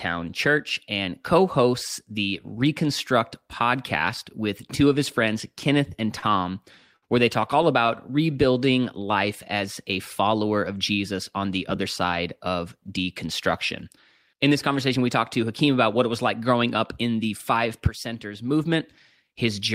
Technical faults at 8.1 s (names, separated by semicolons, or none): repeated stalls (stutter); jitter buffer slow-down